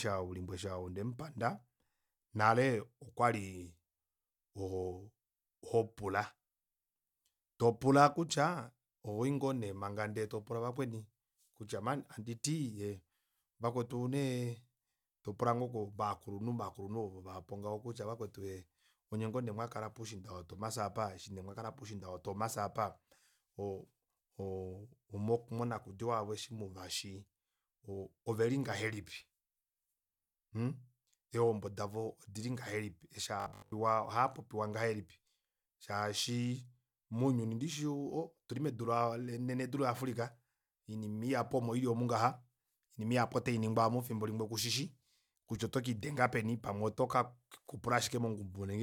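A speech recording with one fault worth flagging: from 33.40 to 33.72 s the voice collapses into a rigid, metallic buzz, the robotic sound from repeated short buffers you'd recognise. The buzz sits at 50 Hz, which fits a 20 ms chunk being looped over and over, and most of that stretch is repeats rather than fresh audio. The likely cause is new audio arriving too slowly, so the playback side kept refilling the gap with the last buffer while the real signal got skipped.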